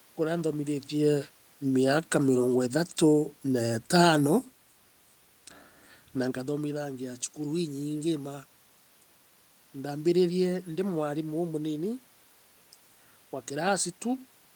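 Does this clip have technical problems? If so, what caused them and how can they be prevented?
Yes, there's one. From 0.92 s to 4.26 s you can hear automatic gain falling: the gain control decided the input was too loud or its background noise too strong and eased its gain down by about 3 dB, so the level sinks steadily and the room noise drops right along with it. That shared drop is what separates it from the talker shifting position around 1 s and again near 6 s. To prevent it, set the input level manually or give the gain control a calmer target.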